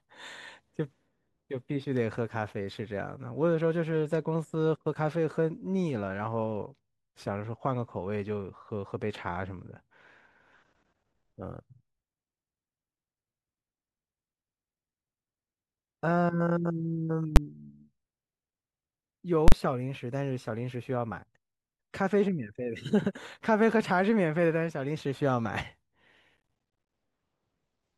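At 17.36 s a calculation in the signal chain produced invalid numbers, and the output jumped to full scale for about 10 ms, so the speech is hit by a single sharp bang. The same fault of invalid numbers at full scale returns at 19.48 s, this time lasting 40 ms to 19.52 s. The block is long enough that it sounds as a loud pop going in, a brief dead stretch at full scale, and a second pop as it releases.

From 26.37 s to 26.93 s the processor could not keep up with its small audio buffers, and it missed deadline after deadline. That is processor overload crackle. Each missed buffer came out as a short hole of silence, and the sizes fit buffers of around 10 ms with roughly twenty of them dropped. The run of hard-edged gaps turns the speech into a gritty, tearing crackle for just over half a second before it clears.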